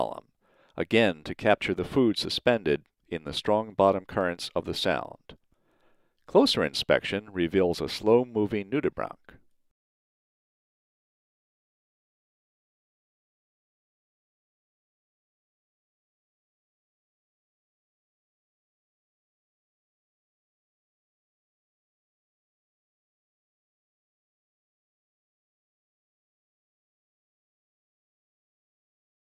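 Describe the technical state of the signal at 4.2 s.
At 4.21 s there's a single sharp click, and it's most likely dropped samples: a couple of samples going missing from the stream. When that happens the waveform skips straight from one value to a later one, leaving a tiny step discontinuity. The gap is only a small fraction of a millisecond, far too short to take out any actual sound, so all you hear is that one click, with a thin vertical line running up the spectrum at that instant.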